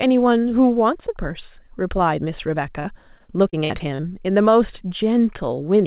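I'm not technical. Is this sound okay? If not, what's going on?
No. From 2.8 to 4.05 s the speech breaks up with repeated packet loss, which gives a robotic sound. Small chunks of audio failed to arrive in time, seven times in just over a second, each gap lasting up to about 51 ms. Each time, the call software filled the hole by stretching the last bit of sound, so about a sixth of that stretch is patched-over audio. That produces the choppy quality. The sound throughout also has nothing above 4 kHz, which fits a standard narrowband phone codec.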